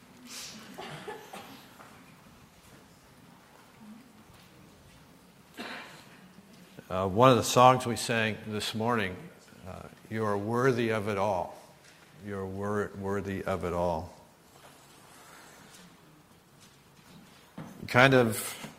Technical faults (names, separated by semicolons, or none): adaptive stream at a lower bitrate